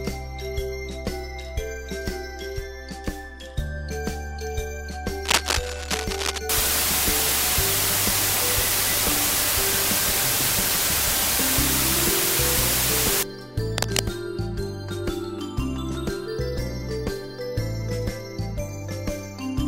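From 5.24 to 6.39 s, a dense, uneven scratching and rustling sits over the sound, a little louder than the audio itself. This is cable scratch noise, most likely a worn cable, connector or control being moved so that its contact resistance jumps about rapidly. Unlike a steady crackle or isolated clicks, the bursts are irregular and tied to the moment of movement, then stop.

From 6.49 to 13.23 s, a constant, even hiss takes over, clearly louder than the sound beneath it. This is low bit depth with dither. The signal is reduced to 3 bits, and dither added before rounding turns the coarse rounding error into smooth white noise. The giveaway against plain low bit depth is that there is no gritty, signal-following distortion, only uniform hiss.

The scratching returns briefly from 13.78 to 14.03 s, the same uneven rustle but shorter.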